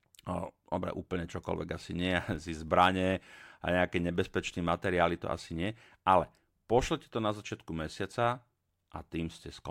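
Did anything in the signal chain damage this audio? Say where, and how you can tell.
Yes. A filter restarted on every block in the processing stage. From 1.32 s to the end, a 25 Hz buzz tracks the speech level. Each 40 ms block starts with a tick.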